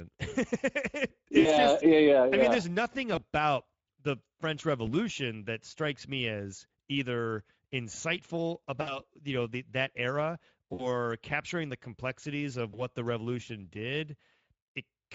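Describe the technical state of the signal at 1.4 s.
At 1.4 s the speech is under VoIP packet loss concealed by the speech codec, from 1.41 to 1.48 s. About 40 ms of audio went missing, which fits two lost 20 ms frames. The decoder stretched its last pitch and filter at falling gain, so the sound smears into a fading buzz or coloured noise rather than dropping to silence or clicking, and it stays weak briefly after.

Beneath this, the whole clip carries Speex codec damage that is plainly audible. Its sound points to a setting of roughly 17 kbps, where the excitation is coarse. The speech sounds hoarse and noisy, with a hissy, shaped fill above 4 kHz instead of real detail. That steady, grainy roughness sets it apart from the brief, decaying smear of the concealment.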